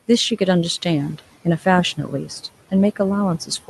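Noise suppressor artifacts run throughout: the room noise sits about 20 dB below the speech, and the suppressor pulls it down by about 15 dB between words, letting it rise back under them. On a spectrogram the noise floor shows as darker gaps that fill in wherever speech energy appears, below a hard band edge at 12 kHz from the call codec.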